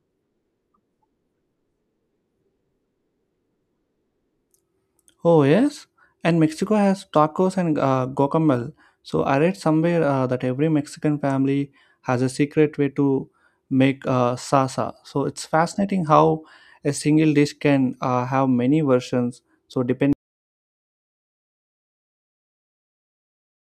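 At 20.13 s the speech just stops dead and stays silent through to the end at 23.65 s, with no room tone underneath. That's an audio dropout to silence, likely a lost input or mute while the recorder kept writing silence.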